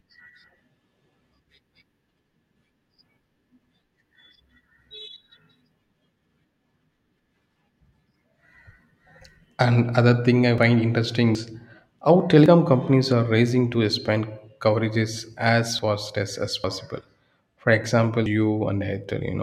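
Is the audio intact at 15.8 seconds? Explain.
No. At 15.79 seconds there is an abrupt jump in the speech, just before "fast as as", where about a tenth of a second of sound is missing. This is likely a dropped buffer (overrun): the audio wasn't collected before being overwritten, so the two sides were spliced together without any silence.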